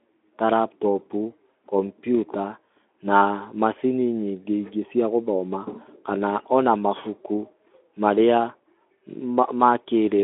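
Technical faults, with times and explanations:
No technical faults are present: the speech comes through a Speex voice link, its band limited to about 250 Hz–3.5 kHz with nothing above 3.8 kHz, which is how such a line ordinarily sounds.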